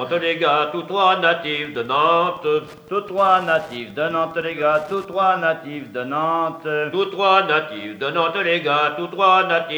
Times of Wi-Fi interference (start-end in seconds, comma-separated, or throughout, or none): 1.35-5.29